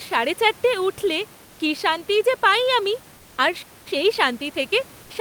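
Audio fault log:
3.17–3.37 s, comfort noise in place of the background: after "শান্তি যে পাই আমি" the sender likely stopped transmitting, so about 200 ms of real background becomes steady, featureless synthetic noise, about 2 dB quieter.
3.62–3.88 s, playback stall: after "যে পাই আমি আর" the player likely ran out of data, and output drops to silence for about 0.23 s mid-flow.
3.88–5.21 s, time-compressed catch-up: the player trims its backlog by cutting and cross-fading small pieces, so speech runs 1.1 times fast at normal pitch.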